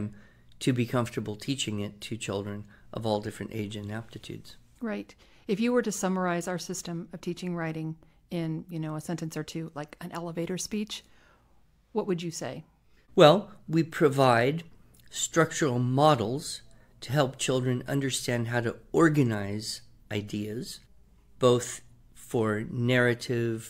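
No audible technical faults.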